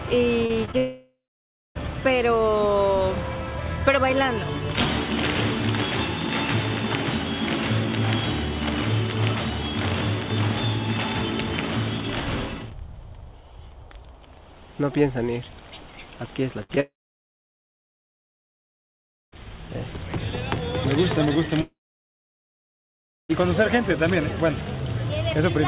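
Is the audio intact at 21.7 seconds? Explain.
No. Between 21.61 and 23.31 s the audio stream stopped arriving, most likely a long network dropout, and about 1.7 s of audio never reached the player. The receiver briefly stretches the last sound into a fading buzz or hiss. For about 1.55 s of the gap there is only silence or a low steady noise. At 23.31 s sound resumes, band-limited below 4 kHz by the G.711 call codec, with the lost stretch simply gone.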